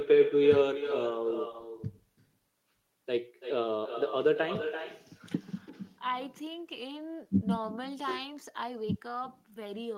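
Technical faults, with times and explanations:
Throughout, echo with no canceller: speech returns around 300 ms later, about 11 dB quieter, as the far-end loudspeaker feeds its microphone back across the network. The waveform shows each burst trailed by a smaller copy; the spectrogram shows faint harmonics repeated later.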